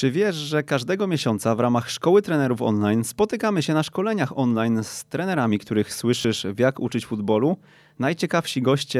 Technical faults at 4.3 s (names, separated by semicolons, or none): none